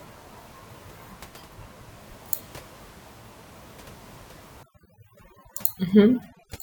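A noise reduction stage set far too aggressively takes over from 4.63 s to the end of this speech clip. That is overdone noise removal: frequency bands sitting close to the tool's noise estimate are pushed down or switched off, and the quieter parts of the voice get cut along with them. The room noise, audible about 19 dB below the speech before that point, drops and breaks up into twinkling specks.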